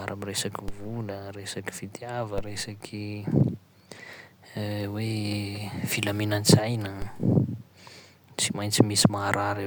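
At 0.68 s, 2.38 s and 7.02 s, DC steps of about −21 to −22 dBFS jump the speech's zero line, each a low thump seen as a broadband spectrogram stripe and waveform offset decaying over a few tenths of a second.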